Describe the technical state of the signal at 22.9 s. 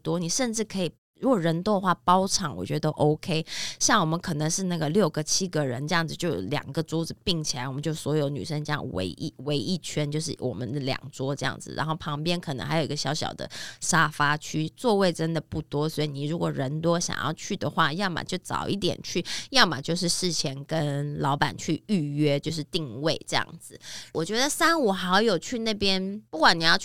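At 22.9 s the speech signal is intact, with no fault to be heard at that moment.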